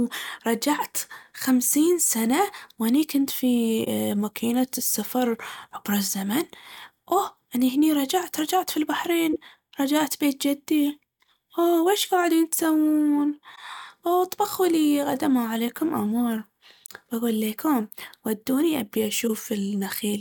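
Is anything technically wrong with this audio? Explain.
Yes. Two kinds of bitstream damage are audible in this speech.

Corrupt frame concealed, at 3.84–3.87 s, 13.55–13.58 s and 16.87 s: the decoder caught damaged frames and covered them. Each spans about the length of the damaged frames, the first long enough to suggest several frames.

Corrupt frame decoded, at 9.33–9.36 s and 19.27–19.30 s: damaged frames, apparently a couple each time, were played as if valid. The misread data throws energy to the wrong frequencies, giving short bursts of misplaced energy peaking at about −15 dBFS.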